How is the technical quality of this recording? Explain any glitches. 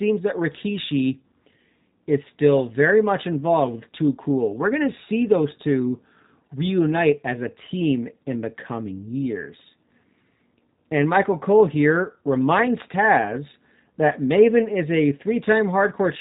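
The quality is narrowband and noticeably processed, with G.729 codec damage running through the whole recording rather than isolated glitches. Nothing above about 3.8 kHz is there, so the speech sounds boxed-in and phone-like. The codec throws the waveform away and rebuilds each short frame from a vocal tract filter, a pitch guess and a handful of pulses. That gives the plainly audible rough, slightly synthetic edge, and the overall character points to a low rate of around 8 kbit/s.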